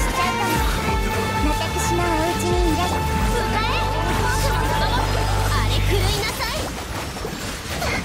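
No dropouts, clipping, glitches or other transport or processing faults can be heard anywhere in the audio.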